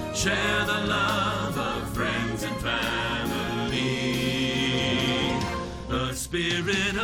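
Nothing here stands out as a technical fault; the audio runs along steadily the whole way, with no glitches, gaps or sudden jumps to point to.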